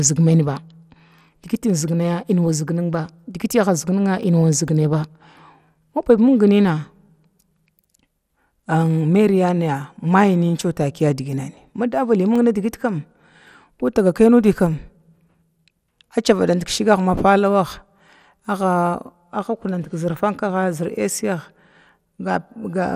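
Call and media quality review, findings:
MP2 compression, whole clip. Speech dull, with gurgling, granular texture. Nothing above 15.8 kHz. Audible damage fits roughly 80 kbps. Likely cause: MPEG Layer II encode with too few bits. Upper sub-bands switched off. Remaining bands coarsely quantised. Band content flickers in and out. Probable component: encode or transcode stage in the media chain.

CD scratch ticks, 4.08 to 4.83 s. Six short ticks, the longest about 2 ms. Uneven strength. Second run, 12.06 to 13.10 s. Eight ticks, each under 2 ms. Same uneven strength. Probable component: disc playback source. A scratch destroys more data on each turn of the disc than error correction can rebuild. Player interpolates or mutes the lost samples, giving a tick per rotation.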